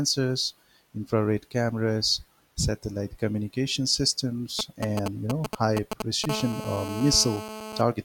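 A 2G handset close to the recording chain was exchanging short control transmissions with its network, and from 4.59 to 6.26 s the audio circuitry rectified those radio pulses into the signal as GSM signalling bursts. Because the phone transmits only in brief groups while signalling, the interference arrives as a galloping dit-dit-dit of short buzzes at the 217 Hz burst rate, roughly as loud as the speech and unrelated to it.

From 6.29 to 7.81 s a handset was in continuous transmission as in an active call, pulsing its carrier 217 times a second without pause. The circuit demodulated that steady pulse train, producing GSM phone buzz: a hard, raspy 217 Hz tone dense with harmonics, sitting about 9 dB below the speech and holding constant underneath it until it stops at 7.81 s.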